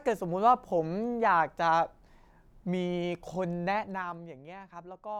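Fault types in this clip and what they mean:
Zipper noise, 3.67 to 4.28 s: the level of the speech drops by about 10 dB here, but the gain moves in 2 dB jumps, roughly fifteen a second, instead of gliding down. Each jump is an abrupt discontinuity in the waveform, so it leaves a small click, and the run of clicks forms a ticking, zipping texture on top of the speech for as long as the level is moving.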